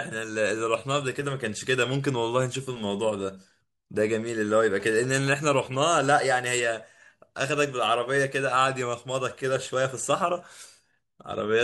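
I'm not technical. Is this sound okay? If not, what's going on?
No. From 4.8 to 6.2 s, a galloping run of short buzzes sits under the speech. These are GSM signalling bursts: a nearby mobile phone's radio pulses are picked up by the audio circuit.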